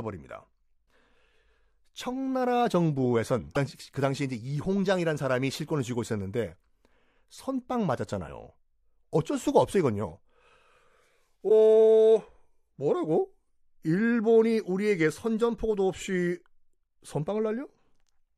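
Three short glitches break the speech at 0.85–0.87 s, 3.54–3.57 s and 11.48–11.51 s, each lasting about one 26 ms frame. The likely cause is a broken MP3 bit reservoir: frames were lost, and the following frame drew its borrowed bits from the wrong data. Each glitch is a brief chirp, burst of noise or short hole with a skip forward. On a spectrogram it shows as a narrow vertical disturbance; on the waveform, as a jagged discontinuity.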